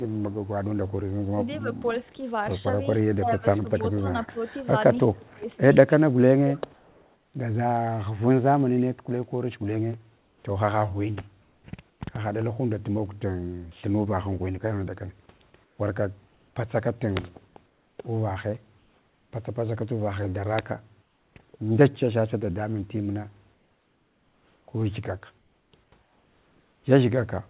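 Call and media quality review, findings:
Echo leak, 0.32–2.11 s, 3.70–4.27 s, 5.28–5.34 s, 6.55–7.06 s. Faint delayed copy of the far talker, 270 ms behind, about 35 dB down (about 30 dB at 3.70 s). Likely residual echo: canceller failing to remove loudspeaker pickup at the far end.

Speech suppressed in double talk, 1.31–1.67 s and 3.06–6.62 s. Loudspeaker-side talker dips about 10 dB, then up to about 20 dB (roughly 1.5 s total). Likely echo canceller confusing overlapping talkers with echo and attenuating both.

Comfort noise in place of the background at 10.18–10.44 s, 11.42–12.00 s, 15.64–16.56 s, 17.66–17.98 s, 18.78–19.32 s, 21.02–21.36 s and 23.54–26.84 s. The real room noise gives way to smoother synthetic noise, about 2–7 dB quieter. Likely DTX silence suppression with receiver-generated fill. The 4 kHz band limit throughout fits G.711.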